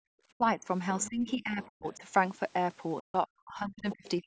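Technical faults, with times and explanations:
0.00–0.08 s, background gated by the echo canceller: right at the start the room sound drops by about 40 dB for roughly 70 ms and then comes back. The canceller turned the microphone down hard while its loudspeaker was active, so the ambience falls to near silence.
0.36–0.66 s, 1.08–2.03 s and 3.00–4.27 s, speech suppressed in double talk: in each span the talker's speech sinks by around 35 to 40 dB in stretches, about 200 ms in the first, 700 ms in the second and a full second in the last, which runs to the end of the clip. The likely cause is both sides talking at once. Unable to separate local speech from loudspeaker echo, the canceller attenuated everything, so the speech dips.
1.01–1.09 s, 1.93–1.97 s and 3.91–4.09 s, other side's voice leaking through: brief scraps of a second voice appear under the talker, roughly 20 dB below the speech in the first and last spans and much fainter, around 35 dB down, in the middle one. 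These are likely residual loudspeaker echo that the canceller failed to remove from the microphone. As is normal for call processing, the band stops at 8 kHz.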